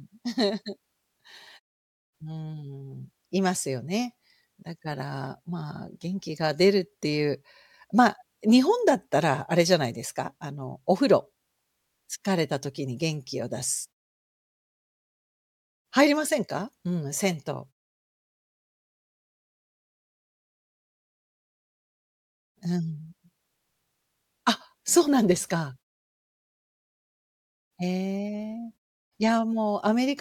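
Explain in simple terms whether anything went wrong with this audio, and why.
Nothing went wrong that a listener would notice: on listening, nothing in the speech stood out as a problem.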